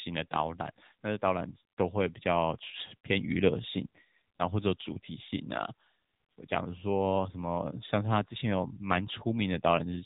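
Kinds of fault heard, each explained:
AMR narrowband mobile codec: The speech has passed through the mobile phone codec used on 2G and 3G networks. It samples at 8 kHz and rebuilds the voice from a vocal tract model fed by a few pulses per short frame. Here nothing above 3.8 kHz survives, so the voice sounds muffled and boxed in. The damage is plainly audible. A buzzy, synthetic edge runs through the whole clip, which fits a low rate near 8 kbps.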